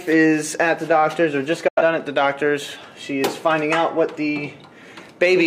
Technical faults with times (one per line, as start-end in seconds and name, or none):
1.68-1.82 digital broadcast dropout